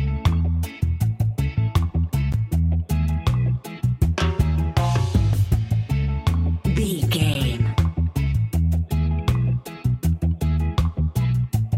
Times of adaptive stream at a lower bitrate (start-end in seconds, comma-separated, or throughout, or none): none